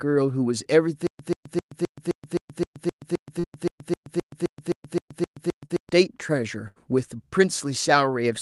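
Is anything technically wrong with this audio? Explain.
Yes. From 1.07 to 5.89 s there is a stutter with silent gaps, likely from the player or stream stalling and replaying its last fragment on each retry before running dry. A burst of about 135 ms repeats 18 times, with about 126 ms of dead silence between repeats, so it returns every 261 ms. The speech meant for that span is lost.

Within that stretch there are two cases of short concealed packet loss, at 3.39 to 3.45 s and 5.65 to 5.72 s. Each time about 40 ms failed to arrive in time, and the receiver filled the hole by extending the preceding sound before blending back. Each is heard as a brief smear or wobble.

At 6.68 to 6.78 s there is a burst of packet loss. About 80 ms went missing in a row, so the receiver carried the last sound forward while fading it. That leaves a short held buzz or dying hiss, and the speech resumes slightly further on with that piece gone.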